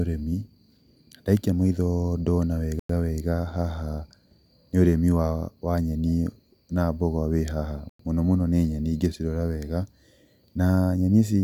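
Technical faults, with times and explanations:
2.79–2.89 s and 7.89–7.99 s, gap between chunks: the speech stops dead for 100 ms right after "ndaikia maitho ndona" and again after "na mboga wĩ haha", then resumes with nothing missing. The two holes sit 5.1 s apart, which fits audio delivered in 5-second chunks with silence inserted at each join. On a waveform each appears as a flat near-silent strip with abrupt edges; a spectrogram shows a clean vertical blank band across all frequencies.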